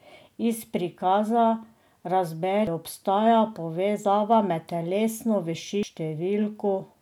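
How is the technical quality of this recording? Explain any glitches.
Two short glitches interrupt the speech, at 2.67 s and 5.83 s. Each is a brief chirp or blip caused by damaged data in a compressed stream: corrupted bytes make the decoder misread frames, lose sync and hunt for the next valid frame header.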